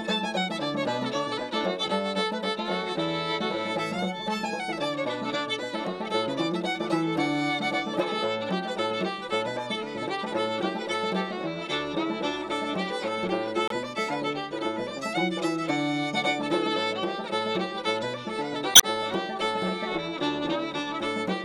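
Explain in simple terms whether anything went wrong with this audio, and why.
Yes, something went wrong: damaged data in a compressed stream. Parts of the stored file were corrupted, so the decoder misread those frames and briefly lost its place. You hear short glitches at 13.68 to 13.72 seconds and 18.72 to 18.84 seconds.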